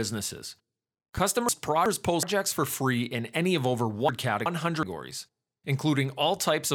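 At 1.18 to 1.20 s there's a single loud pop, peaking a few dB above the speech, which just carries on under it. It sounds like a sharp electrical transient, likely a switch, static discharge or a driver glitch dumping a voltage spike into the line.

Then from 1.49 to 2.23 s you get chunks out of order: a block of about 372 ms turns up one chunk late, so two neighbouring pieces swap places. The speech jumbles briefly. The same thing happens again from 4.09 to 4.83 s.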